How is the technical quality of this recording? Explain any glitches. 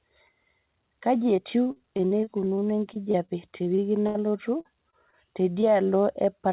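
The recording is marred by packet-loss glitches, heard through a call path band-limited to 4 kHz.

Repeated packet loss (robotic sound), 1.36 to 4.17 s: twenty gaps, the longest 79 ms, each patched by extending prior sound, giving sustained choppy texture with pieces missing.

Short concealed packet loss at 4.61–4.67, 4.91–4.95, 5.11–5.15, 5.53–5.57 and 5.61–5.64 s: isolated 20–40 ms holes filled and blended, heard as brief smears, not continuous robotics.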